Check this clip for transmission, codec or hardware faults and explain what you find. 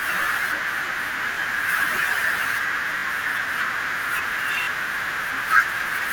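Three brief stutters in the speech come from a repeated buffer fault. The first, at 1.34 to 1.37 s, plays one piece twice. The second and third, at 2.99 to 3.03 s and 4.63 to 4.67 s, play a piece three times. Each has a hard join, heard as a short stutter. Fresh audio arrived late, so the device replayed its last 21 ms block, which fits a 1024-sample buffer. Roughly 20 ms of sound was lost at the first event and about 40 ms at each later one.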